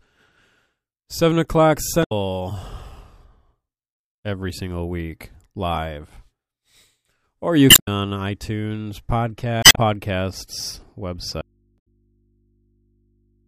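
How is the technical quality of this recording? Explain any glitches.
The technical quality is poor. The speech is interrupted by repeated data-damage glitches and ends in a dropout that lasts to the end of the clip.

Damaged data in a compressed stream appears at 2.0–2.12 s, 7.67–7.88 s, 9.61–9.78 s and 11.75–11.87 s. Corrupted bytes make the decoder misread frames, lose sync and hunt for the next frame header, so each event is a short chirp, squawk, click or hole. On a spectrogram each shows as a brief disruption. The waveform shows a discontinuity at each point.

An audio dropout to a faint residue starts abruptly at 11.41 s and runs to the end. The speech vanishes and only mains hum remains, roughly 40 dB below the speech level. The likely cause is a lost signal feed with the downstream path still live, leaving the open input to pick up hum. The waveform collapses to a thin steady trace, and the spectrogram keeps only low, narrow horizontal hum lines.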